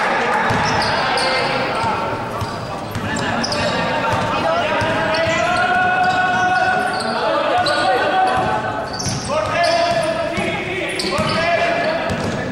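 No technical faults can be heard anywhere in this clip. There is no moment where a problem begins or ends.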